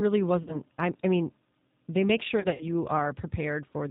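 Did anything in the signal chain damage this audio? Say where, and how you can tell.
Yes, two things went wrong, both on the VoIP side. The whole clip has the G.729 codec's sound: nothing above 4 kHz, and a slightly rough, synthetic edge on the speech that's plainly audible. That fits an 8 kbit/s G.729A link rebuilding speech from a filter and a handful of pulses per frame.

There's also VoIP packet loss concealed by the speech codec in two spots. From 0.43 to 0.60 s, just before "I I mean they", about 40 ms went missing. From 2.40 to 2.64 s, right after "I mean they make", about 120 ms dropped out in patches over roughly 200 ms, the longest run 60 ms. In both, the decoder stretched its last pitch and filter into a buzzy tone or a coloured noise that fades, and the voice stays weak for a moment after the packets return.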